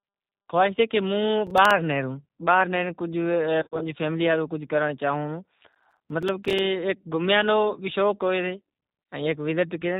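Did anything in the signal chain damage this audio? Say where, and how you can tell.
Yes. Throughout the audio the speech sounds narrow, slightly rough and synthetic, with nothing above 4 kHz. This is G.729 codec damage. The 8 kbit/s coder rebuilds speech from a vocal tract filter, a pitch predictor and sparse pulses, so fine detail is lost.

At 1.47 to 1.71 s and again at 5.72 to 6.59 s, a gritty tearing crackle rides on the sound. This is processor overload crackle at the driver or buffer stage. Rapid tiny silent gaps land at a spacing that fits a buffer of about 5 ms, where deadlines were repeatedly missed. The second burst is much longer.

From 3.61 to 3.87 s the speech turns buzzy or noisy and smeared, then weakens. This is VoIP packet loss concealed by the speech codec, in the network stage. About 130 ms of audio went missing, scattered over 200 ms, with the longest gap 40 ms. The decoder extrapolated from its last pitch and filter while fading the level. 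A brief 20 ms dip of the same kind occurs at 9.04 s.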